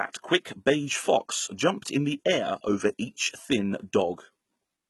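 Throughout, heavy HE-AAC compression, likely near 16 kbps, replaces treble with copied lower bands: s sounds turn gritty, and spectrograms show blocky, repeated upper bands.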